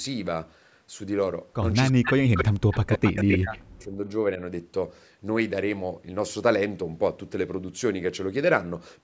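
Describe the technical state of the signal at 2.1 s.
At 2.1 s the speech sits inside a stretch of speech suppressed in double talk, running from 1.9 to 4.0 s. The echo canceller, likely unable to tell its own talker from loudspeaker echo while both sides spoke, pulled the level down by as much as around 40 dB, so the voice dips and breaks into pieces. On a waveform the envelope collapses in patches, and a spectrogram shows the upper harmonics vanishing.

Overlapping it, from 2.05 to 2.14 s, is a brief echo leak: a delayed copy of the voice arriving about 260 ms late and only a few dB below the speech, likely residual loudspeaker pickup the canceller missed. It sounds like a delayed ghost of the talker. A spectrogram shows a duplicate of the harmonic pattern shifted later in time.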